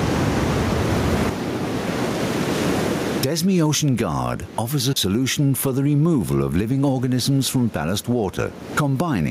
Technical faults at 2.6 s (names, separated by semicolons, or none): gain pumping